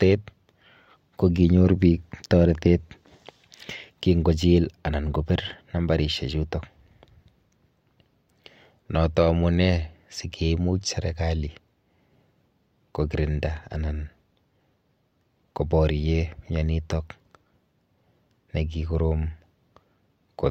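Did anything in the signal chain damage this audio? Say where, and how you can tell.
No, none of the stages this speech passed through has left any audible damage in the signal.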